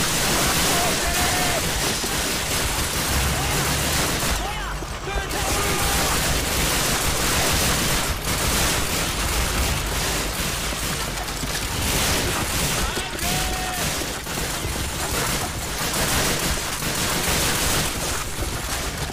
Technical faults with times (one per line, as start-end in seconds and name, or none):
none